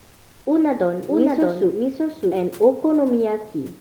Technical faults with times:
0.00-0.45 comfort noise in place of the background
1.08-2.46 doubled audio track

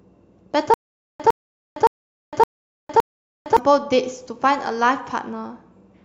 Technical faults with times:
0.74-3.57 stutter with silent gaps

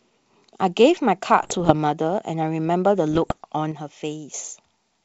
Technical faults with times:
1.39-1.72 bit errors on an ADPCM link
3.10-3.33 bit errors on an ADPCM link
3.72-4.34 one channel drops out

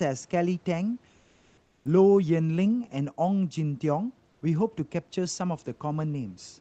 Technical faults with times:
1.21-1.81 comfort noise in place of the background

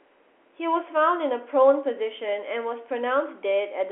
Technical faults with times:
none

